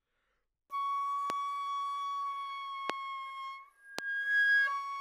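Loud pops at 1.30–1.32 s, 2.90–2.92 s and 3.99–4.01 s, each a single sharp thump about 20 to 25 dB above the sound, likely from an electrical pulse. Unlike a dropout or digital click, the sound carries on unbroken underneath.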